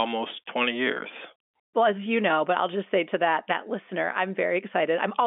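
No technical faults are audible.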